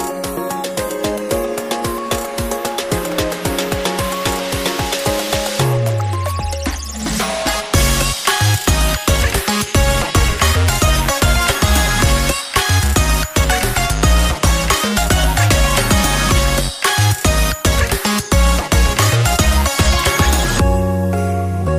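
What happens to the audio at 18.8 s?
A regular tick sounds there, one of about five spaced 2.0 s apart between 10.99 and 18.97 s. These are periodic USB or driver dropouts: something stalls the audio path at a fixed interval, and roughly half a millisecond of sound drops to silence each time.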